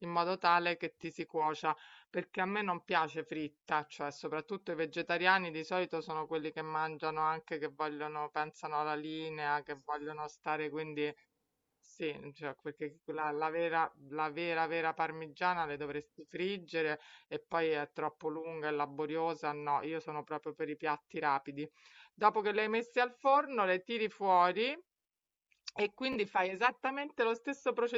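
Two Bluetooth stutters: a brief one at 1.02 s, then a longer one from 26.13 to 26.16 s, where lost packets made the receiver replay its last slice as a quick buzz.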